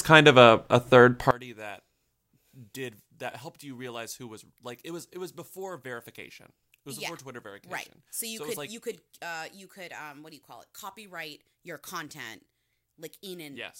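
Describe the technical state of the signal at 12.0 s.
At 12.0 s, as throughout from 1.31 s, the speech is about 23 dB down, likely from one channel inverted cancelling the shared centre content in mono.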